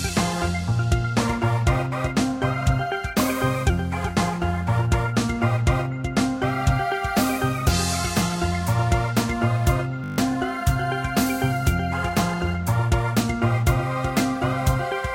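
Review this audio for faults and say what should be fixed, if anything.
A system hang loop runs from 10.04 to 10.18 s. A single 20 ms slice of the sound repeats exactly seven times, so the passage turns into a steady buzz at 50 Hz, the loop rate. The driver or host stopped supplying fresh samples, and the playback hardware kept cycling through the last ring buffer it held. About 150 ms of real audio is lost and replaced by this drone. To prevent it, run the audio callback on a real-time thread that never blocks, and have the driver output silence when the buffer isn't refilled in time.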